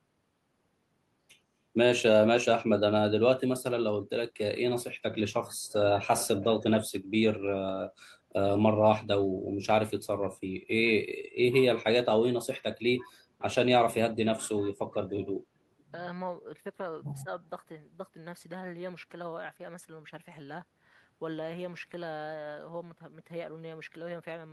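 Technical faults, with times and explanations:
17.23 to 17.28 s, speech suppressed in double talk: the speech briefly dips by roughly 10 dB for about 50 ms, likely an echo canceller turning down the near talker while far-end audio overlapped. The waveform shows a short notch in the envelope, and the spectrogram a thin, faded vertical band.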